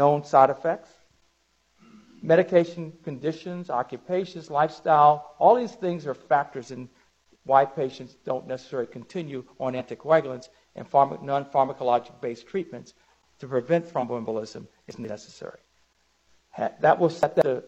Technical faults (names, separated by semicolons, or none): compressed frames skipped; chunks out of order